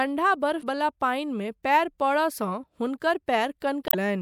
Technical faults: damaged data in a compressed stream

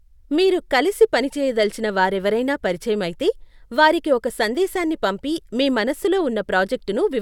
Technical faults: none

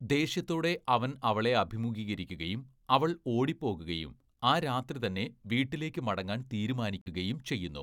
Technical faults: Bluetooth dropout

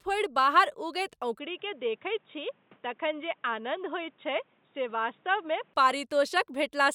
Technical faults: input switched to a poorer device

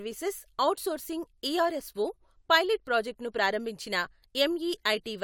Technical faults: none

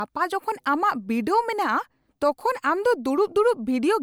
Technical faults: none

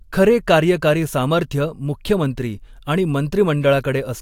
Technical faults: none

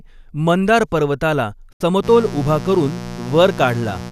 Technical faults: digital broadcast dropout; mains buzz

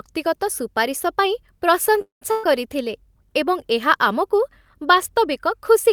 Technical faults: call audio freeze; burst of packet loss

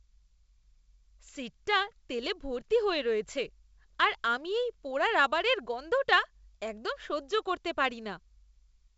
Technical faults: none

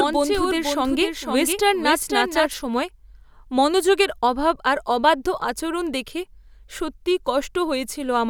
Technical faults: doubled audio track

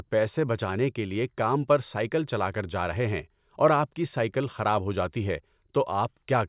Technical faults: none

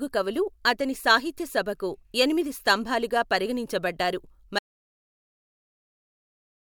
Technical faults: audio dropout to silence

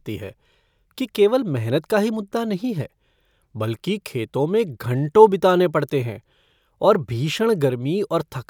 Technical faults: none

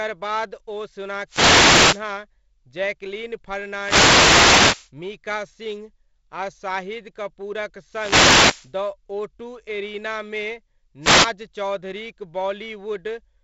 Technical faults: wireless microphone noise hit

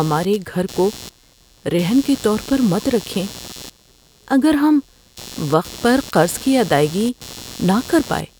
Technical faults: computer activity noise

